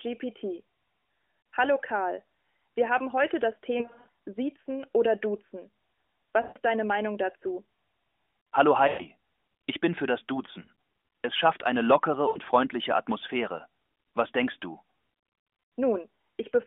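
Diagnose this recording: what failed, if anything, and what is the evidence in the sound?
Lost AMR speech frames at 3.78–4.08 s, just after "wir haben heute das", then 6.42–6.58, 8.88–9.06, 10.62–10.69 and 12.28–12.38 s. Radio errors corrupted frames, so the decoder replayed the last good pitch and vocal-tract settings at falling gain, giving short smeared dips and warbles.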